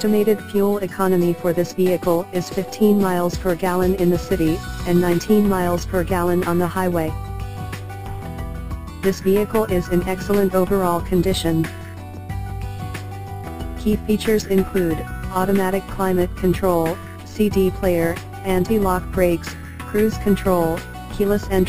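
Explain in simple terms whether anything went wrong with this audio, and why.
Yes, something went wrong, for the whole clip. This is imaging from sample-and-hold upsampling. The sound was stretched to a higher rate by repeating each sample without smoothing. That leaves mirror copies between 6 and 12 kHz, heard as a bright metallic fizz following the sound.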